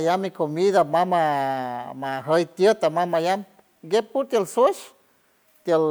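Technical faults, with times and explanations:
No technical faults can be heard anywhere in the speech. Nothing in the recording calls for a time or an explanation.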